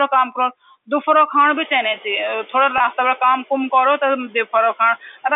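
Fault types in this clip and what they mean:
Noise suppressor artifacts: the suppressor cuts the steady room noise by about 9 dB frame by frame, so the leftover noise pumps around the speech.
Packet loss with pitch repetition: a 20 ms gap, which fits one lost packet, was bridged by repeating the last pitch period, giving a brief buzzy hold at 2.78 s.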